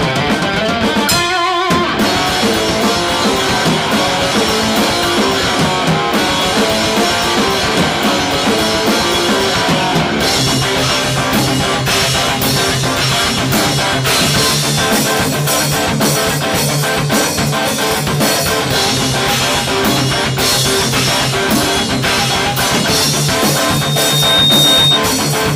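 At 23.35 s a loudspeaker feedback squeal begins: the microphone re-amplifies its own loudspeaker, and a 3.7 kHz tone swells over about a second to sit a few decibels above the sound until 25.01 s. A spectrogram shows one bright horizontal line, and the waveform envelope balloons.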